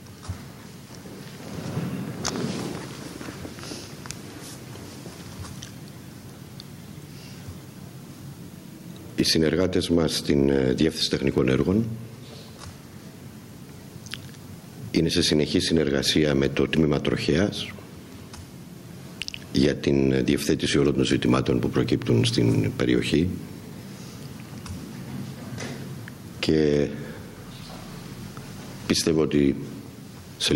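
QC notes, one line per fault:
throughout, gain pumping: the level swings about 10 dB, so loud and soft parts sit squashed close together. The likely cause is input gain set far too high, with a fast limiter clamping every peak.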